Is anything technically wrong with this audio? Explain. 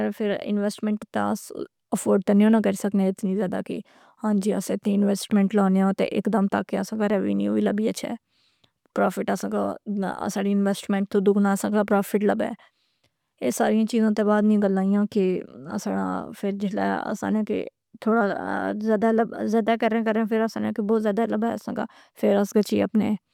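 No, nothing technically wrong stood out on listening to this speech recording.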